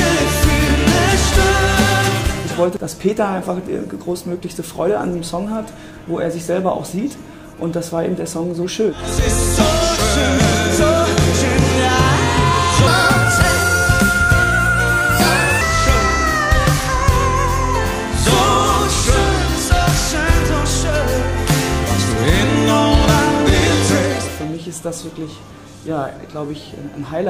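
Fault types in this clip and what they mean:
Section at the wrong speed: one passage plays 1.35 times fast, pitch about five semitones higher and timing hurried together, unlike a pitch shift that keeps tempo.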